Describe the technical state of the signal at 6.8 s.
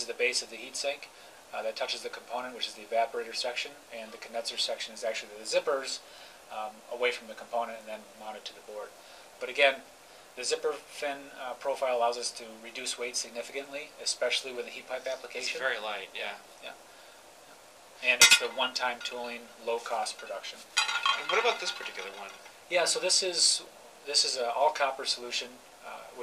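At 6.8 s the signal is intact, with no technical fault present at that moment.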